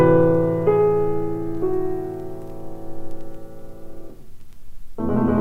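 No technical faults can be heard anywhere here.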